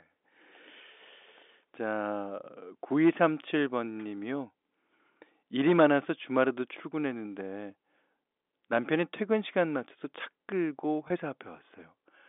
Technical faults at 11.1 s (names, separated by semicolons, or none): packet loss with pitch repetition